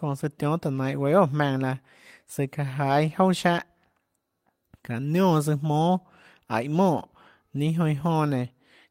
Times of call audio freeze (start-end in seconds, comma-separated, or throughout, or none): none